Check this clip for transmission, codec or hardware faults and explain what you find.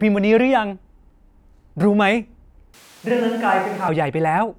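One fault is audible. Switch to a distant microphone, 2.74 to 3.88 s: likely the close microphone dropped out. Speech abruptly turns roomy and thin, a few decibels quieter and noisier, then snaps back.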